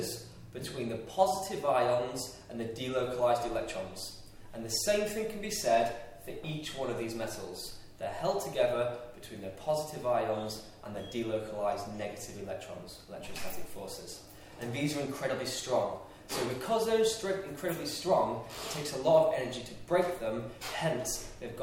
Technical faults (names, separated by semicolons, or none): mains hum